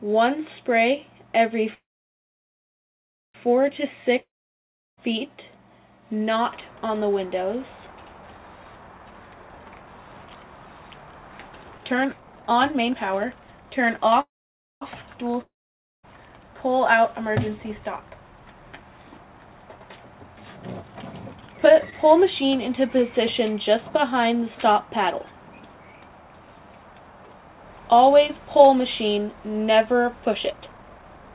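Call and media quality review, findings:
Call audio freeze, 1.74–3.36 s and 14.21–14.83 s. Last sound smears into a fading buzz or hiss, then silence for about 1.5 s and 0.54 s. Likely jitter buffer underrun from held-up packets. Audio resumes where it stopped, so nothing is lost, just roughly 1.6 s and 0.6 s of added delay.

Long network dropout, 4.20–4.99 s and 15.41–16.05 s. Same fading fill into silence (about 0.71 s and 0.54 s), but audio comes back further on. Roughly 0.78 s and 0.62 s is simply gone. Likely packet loss on the network side.

Jitter buffer speed-up, 9.11–14.14 s at 120%, 20.57–21.76 s at 141%, and 30.26–31.33 s at 142%. Receiver trims pitch-period chunks to drain the excess backlog. Things sound rushed at unchanged pitch, with roughly a second cut in the first stretch and about half a second in each of the others.

Short stall from a late packet, 21.90–21.94 s. Tiny hold where a packet missed its slot and the buffer stretched the last sound by 19 ms, giving a slight buzz or dip. 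No content lost.

All of this rides on the G.711 mu-law call path at 64 kbps, which is why nothing above 4 kHz comes through.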